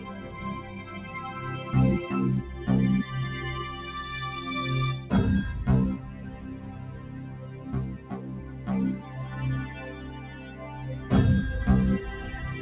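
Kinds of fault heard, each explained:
Noise suppressor applied to music or sounds: A speech-tuned noise suppressor stayed active on material it wasn't built for, so it kept treating held tones, ambience and reverb as noise to be removed. Throughout the clip, its gain rides up and down by something like 10 dB. Sustained parts and decays sink while sharper onsets pass, which makes the sound pump and thin out. This happens within the band-limited call audio, which stops at 4 kHz.
Sound cut by the noise suppressor: In two stretches the suppressor judged the sound itself to be noise and pulled it down harder than the rest. From 5.98 to 7.66 s and again from 7.86 to 8.67 s, steady and fading material drops by up to about 5 dB, and its tails are clipped short while sudden events mostly survive. Together the two stretches last a little over two seconds.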